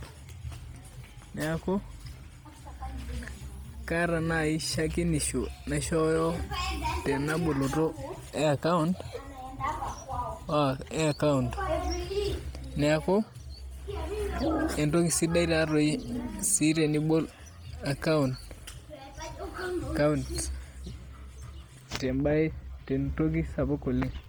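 Speech, heavily coded from start to finish. The top end sounds grainy and breathy, with noise replacing fine detail. The likely cause is low-bitrate Bluetooth LC3 compression.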